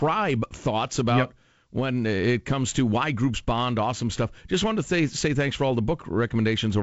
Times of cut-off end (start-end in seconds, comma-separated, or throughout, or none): none